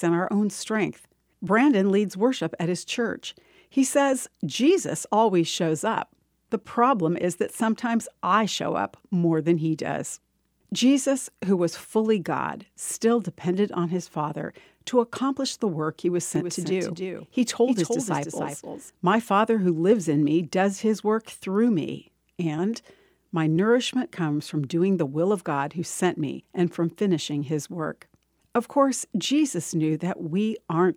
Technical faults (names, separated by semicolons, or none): doubled audio track